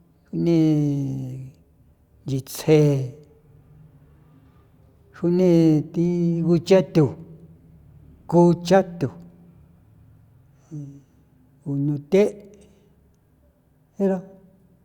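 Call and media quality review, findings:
Nothing stood out on listening to the speech recording, and no symptom was found that would point to a component to investigate.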